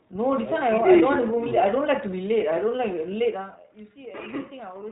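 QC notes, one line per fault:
Throughout: iLBC codec. The speech has been squeezed through a narrowband VoIP coder working at 15.2 kbps, which fits 20 ms frames. Each frame's excitation is coded on its own, so the voice comes out intelligible but plainly rough and slightly synthetic. Nothing is left above about 3.8 kHz, so sibilants and fricatives are dull and the top end is gone.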